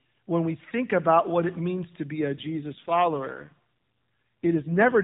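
From 2.20 s, right after "what it means to", until the clip ends, there is an AMR rate drop. The speech turns rougher, buzzier and more synthetic, which fits the codec falling from its 12.2 kbps mode to 5.9 kbps. The band stays the same, still cut off at 4 kHz as before, and there is no gap. On a spectrogram, the harmonic detail blurs after 2.20 s. The waveform stays continuous with no dropout.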